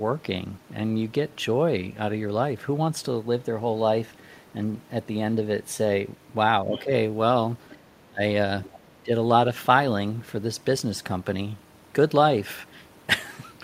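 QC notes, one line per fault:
6.64–6.91, 8.08–8.21 and 8.84–9.10 s: speech suppressed in double talk. The echo canceller likely couldn't separate the talker from the loudspeaker echo while both sides spoke, so it attenuated everything. The speech dips briefly, slightly at 6.64 s but as much as about 20 dB at 8.08 s.
6.76–6.81, 7.70–7.75 and 8.68–8.79 s: other side's voice leaking through. Echo cancellation likely left residual loudspeaker sound in the microphone signal. Short, faint scraps of a second voice come through, roughly 20–25 dB below the main speech.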